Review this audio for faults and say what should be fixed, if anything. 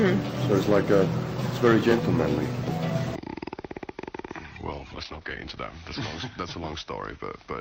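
From 4.52 to 5.77 s, a call bitrate drop: everything above 8 kHz vanishes and the sound goes rough, which fits a fall from about 48 to 11 kbps. Having the bandwidth estimator ride out brief dips instead of slashing the encoder rate would prevent it.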